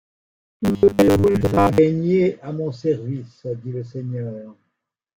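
From 0.01 to 1.79 s the speech takes on a robotic sound from repeated short buffers. It becomes a rigid, metallic buzz at 100 Hz. The likely cause is a 10 ms buffer being replayed while new audio was late, with most of the real audio skipped.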